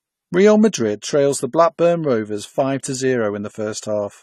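Throughout, AAC compression likely squeezed the speech to a low bitrate around 32 kbps, cutting everything above 13.9 kHz and leaving it dull, smeared and fizzy on sibilants.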